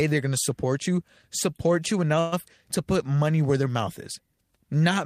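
At 2.19 s, just after "support you support you", the speech stalls for about 0.15 s in a call audio freeze, ending at 2.34 s. The last sound is stretched into a brief fading buzz with no true silence, and speech then resumes from exactly where it stopped, so nothing is lost but everything after arrives 126 ms late. This pattern points to packets held up in transit, which likely left the receiver's jitter buffer empty.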